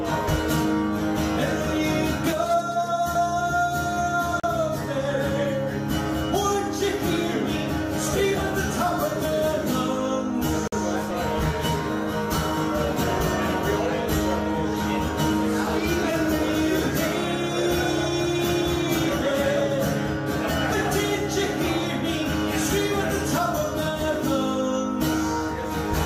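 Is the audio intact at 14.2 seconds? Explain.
Yes, at 14.2 seconds the audio is intact, with no dropout, click, distortion or other fault to be heard at that moment.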